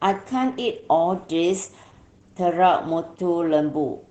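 Throughout the speech, Opus voice compression is plainly audible. The sound points to the SILK coder at a low bitrate near 12 kbps, limited to wideband. A spectrogram shows nothing above about 8 kHz and smeared harmonics, so the speech sounds muffled, hoarse and slightly robotic.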